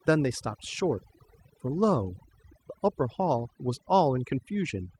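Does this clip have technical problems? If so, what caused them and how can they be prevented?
Yes. Overdone noise removal runs through the whole speech clip. A noise reduction stage was pushed too hard on a noisy recording. It cuts individual frequency bands whenever they sit close to its noise estimate. The quieter parts of the voice fall below that line and vanish with the noise. The pauses drop to near silence, sprinkled with twinkling specks. To prevent this, apply gentler reduction and reduce noise at the source when recording.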